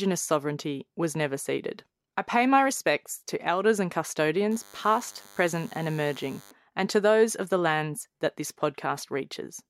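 From 4.51 to 6.51 s, DECT cordless phone buzz: rectified radio bursts every 10 ms give a thin 100 Hz buzz, edgier and richer in harmonics than mains hum.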